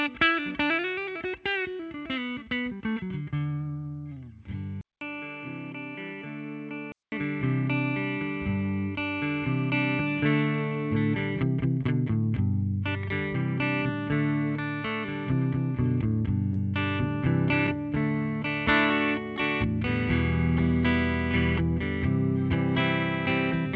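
At 4.81 s the sound turns abruptly dull and boxy after a gap of about 200 ms. Everything above 3.4 kHz is gone, the level drops by roughly 5 dB, and a new, faint background noise sits well beneath the signal. At 7.12 s the fuller sound returns. This is most likely an input switched to a poorer device: the recording moved to a narrower-band microphone or a headset's call profile, with its own tone, level and noise, and then moved back.

Later come three brief glitches, each a tiny smear or wobble: at 11.83 s, from 16.53 to 16.57 s, and at 17.67 s. These are short concealed packet loss. About 10 ms, 20 ms and 10 ms of audio failed to arrive in time, and the receiver patched each hole by extending the preceding sound before blending back into the real signal. The surrounding call path, whose response stops at 8 kHz, fits G.722 at 64 kbps.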